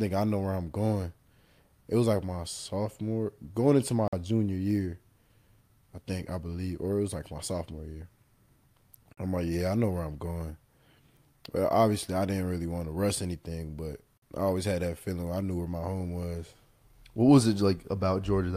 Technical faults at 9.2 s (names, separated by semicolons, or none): gap between chunks